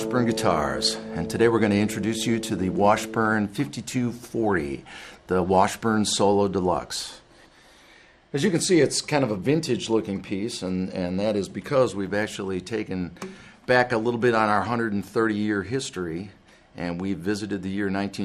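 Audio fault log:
throughout, MP2 compression: the sound is dull and clouded by a gurgling, granular distortion, with the top end coming and going rather than staying steady. This is likely MPEG Layer II coding, whose 32 equal sub-bands share a small bit budget. Starved upper bands are switched off and flicker back, while the remaining ones are coarsely quantised. The level of damage fits a low rate of around 80 kbps.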